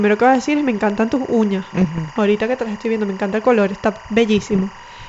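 A steady chirping warble runs behind the speech for the whole clip. It flips between two pitches near 1 and 2 kHz, sitting roughly 20 dB below the voice. This is timecode bleed: linear timecode leaking in from a neighbouring track or cable, and its rhythm fits 23.976 frames per second code.

At 0.90 s, just after "a decir es me" and before "tus uñas", a single sharp broadband tick cuts through. This is a bit error spike. A flipped bit made two consecutive samples jump by a power of two and snap straight back, so the click has nothing to do with the speech around it.

From 1.73 to 2.18 s the sound breaks into rough pops and gritty bursts with brief level lurches. These are bit errors on an ADPCM link, at a rate of roughly 0.4 percent. Each corrupted bit throws the decoder's step size and predictor off track, so every error rings on for some milliseconds instead of staying a lone click. The wideband G.722 path carrying the speech keeps its clear top end up to 7 kHz.

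At 2.85 s, after "que te las" and before "viendo me encanta el", another bit error spike gives a sharp tick, this time a three-sample excursion. A third comes at 3.96 s, right after "me encanta el color". That one is a single flipped sample, heard as one brief click.

From 4.51 to 4.64 s a shorter, lighter burst of pops and roughness returns. It is again bit errors on the ADPCM link, at a lower rate of a fraction of a percent, with the decoder briefly losing track before it settles.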